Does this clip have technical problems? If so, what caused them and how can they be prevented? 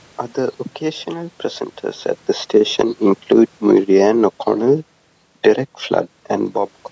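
Yes. Automatic gain falling starts at 2.56 s, right after "occasional presenters at the", and runs until 5.01 s. The gain control judged the input too loud, or its background noise too strong, and pulled its gain down by about 4 dB. The drop is gradual. The speech and the room noise behind it sink together, unlike the level shifts near 2 and 6 seconds, where the talker moves. To prevent it, set the microphone input lower or disable automatic gain control.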